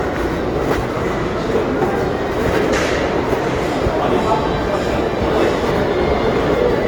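A recording of sounds that comes across rough and grainy from start to finish, with textured and tonal parts turned noisy rather than swirling. Nothing is heard above about 20.1 kHz, so the full audio bandwidth is kept even though the damage is plainly audible. This is likely Opus compression in its music (CELT) mode. Starved for bits, the encoder keeps each band's energy but fills the detail with folded or noise content, which fits a low rate near 24 kbps.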